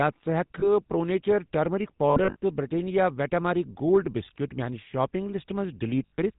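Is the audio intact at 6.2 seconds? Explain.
No. Lost GSM frames run from 6.06 to 6.19 s, right at that moment: about 100 ms of damaged frames scattered over 120 ms, the longest run around 70 ms. Each gap is filled by repeating the last good frame's settings, so the sound hangs as a rough, metallic ring rather than cutting out. Underneath, the GSM full-rate codec's damage is plainly audible, consistent with a 13 kbps stream. It rebuilds the vocal tract from sparse pulse excitation and drops everything above 4 kHz, leaving the speech buzzy, gravelly and dull.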